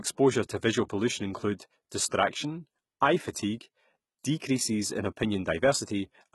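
From start to finish the speech carries heavy codec damage, most likely from HE-AAC compression at a bitrate around 16 kbps. Only the lower spectrum seems truly coded. The treble, which still extends to about 20.6 kHz, sounds rebuilt by spectral band replication, copied up from lower bands under a coarse envelope. Its harmonics fail to line up with those below the crossover, so s sounds come out gritty, metallic or lispy.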